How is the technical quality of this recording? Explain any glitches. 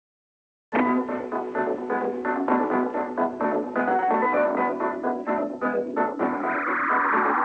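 The recording has one glitch, at the very start; the whole clip is band-limited, with nothing above 8 kHz, which fits a wideband call codec such as G.722.

From 0.00 to 0.72 s there is comfort noise in place of the background. The sending side stopped transmitting during the quiet opening, likely because of discontinuous transmission, and the receiver filled the gap with generated noise roughly matched to the room. That gives a flat, textureless hiss about 14 dB quieter than the real background, which then returns at 0.72 s.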